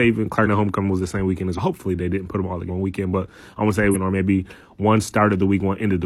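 The speech jumps ahead at 0.42, 1.54, 2.65 and 3.90 s. These are compressed frames skipped: whole frames were never decoded. The first three each lose about a fifth of a second. The last loses about half a second.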